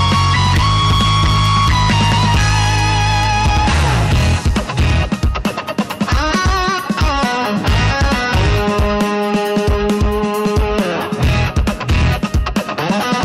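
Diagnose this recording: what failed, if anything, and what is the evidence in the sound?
Hard clipping runs through the whole recording, most likely at the converter or a gain stage feeding it. The level is driven roughly 10 dB past what that stage can pass, so the peaks are cut flat and about a fifth of the samples sit on those flattened tops. The flattened tops add dense high-order harmonics, heard as a harsh fuzz on every loud moment rather than occasional crackle on isolated peaks.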